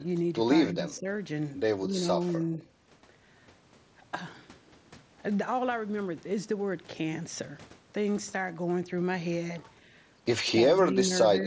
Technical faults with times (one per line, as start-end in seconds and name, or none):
0.71-1.08 speech suppressed in double talk
0.93-1.00 echo leak
1.86-2.60 speech suppressed in double talk
10.47-10.52 echo leak
10.53-11.47 speech suppressed in double talk